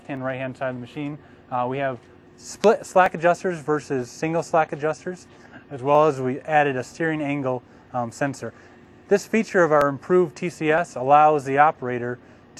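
From 0.17 to 11.74 s a click recurs every 0.963 s, around fifteen in all, wherever signal is present. These are clock drift buffer slips, likely from two devices whose clocks differ by a few hundred ppm, forcing a block of roughly fifteen samples to be dropped or repeated at each slip.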